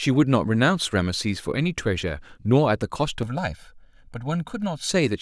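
It's a short speech clip, and from about 3.23 s to 4.89 s it turns hollow and phasey, the classic sound of channel delay causing comb filtering. One side is running roughly a millisecond and a half behind the other, so when the two fold down to mono, whatever they share cancels at regularly spaced frequencies. The first notch lands somewhere around 400 Hz.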